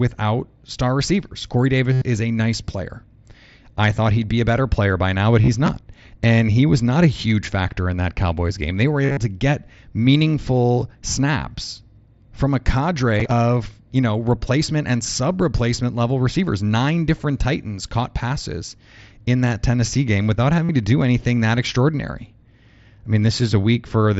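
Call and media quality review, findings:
Buzzy held tone with a slight warble on recovery at 1.93–2.02 s (before "is a nice player"), 5.42–5.48 s (after "player by now but"), 9.03–9.17 s, and 20.65–20.69 s (between "game without" and "to do anything that"). Concealed Bluetooth headset packet loss on the headset-to-phone link. Receiver loops the last ~20 ms of waveform to fill the gaps. Losses run about 45 to 105 ms, partly scattered.

Gritty crackle and tearing at 5.66–6.14 s and 13.20–13.31 s. Processor overload crackle. Runs of missed audio deadlines, each skipped buffer leaving a hard-edged gap. The spacing fits buffers of roughly 10 ms, and the longer burst points to some twenty misses.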